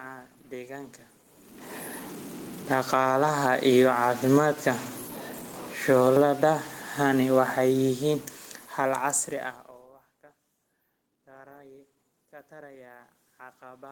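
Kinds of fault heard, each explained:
Stuck bit: Errors run through the whole clip, and the pauses fill with hiss instead of falling silent, likely from one converter bit held at a fixed value. A spectrogram shows broadband haze even between phrases, and the waveform has a jagged, stepped floor.
Automatic gain falling: The level control pulls the gain down gradually after loud input or strong background noise, by about 11 dB over 2.58 to 3.12 s and about 16 dB over 5.75 to 9.79 s. Voice and background sink together. The waveform envelope tapers, and the spectrogram darkens evenly across all frequencies.
Automatic gain rising: The control lifts the gain gradually when the input runs quiet, by about 10 dB over 3.05 to 4.95 s and about 5 dB over 6.37 to 6.85 s. From 11.26 s the input drops about 21 dB and the gain climbs to compensate. Background swells along with the voice, shown as a widening envelope and a brightening spectrogram.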